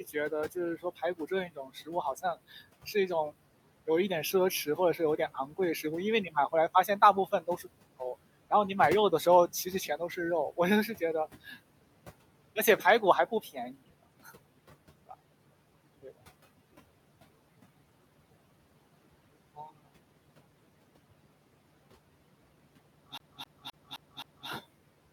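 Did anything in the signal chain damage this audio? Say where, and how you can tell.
Yes. Noise suppressor artifacts are present throughout, from call processing. The suppressor pulls steady background down by about 18 dB frame by frame. The room noise, sitting about 18 dB under the speech, therefore sinks between phrases and swells beneath them.

Speech cut by the noise suppressor occurs in the same stage, at 0.03–2.87 s, 4.65–8.51 s, 9.65–11.57 s and 12.56–14.31 s, with drops of up to about 15 dB. Soft consonants and word endings, roughly half a second in the first span and less in later ones, were mistaken for noise and sound swallowed.

CD stuck on one turn, a storage and playback fault, runs from 23.18 to 24.49 s. A 0.26 s slice plays five times, with a short mute at each jump. That fast, even stutter comes from the laser being thrown back one track on every revolution of the disc.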